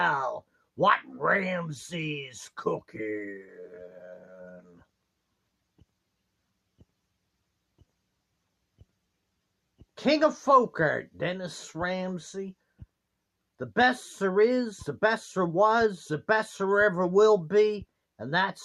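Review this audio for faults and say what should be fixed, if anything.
A call bitrate drop runs from 1.34 to 2.87 s. The sound turns rougher and coarser for about 1.5 s before clearing. This fits the encoder being told to work at roughly 28 kbps instead of 64 kbps after the call's bandwidth estimate fell. To prevent it, give the link enough stable headroom and tune the bandwidth estimator so brief congestion doesn't trigger sharp bitrate cuts.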